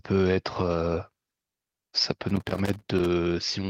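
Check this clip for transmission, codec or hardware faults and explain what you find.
One hardware fault is present. From 2.29 to 3.06 s, loose connector crackle: an unstable contact repeatedly opens and closes, chopping the speech into an irregular burst of scratchy crackle.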